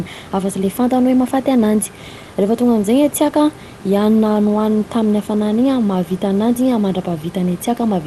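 Nothing's gone wrong in this speech recording: it comes through a call link with a bit of quiet room noise sitting about 22 dB under the talking, and no technical faults turn up anywhere along the way.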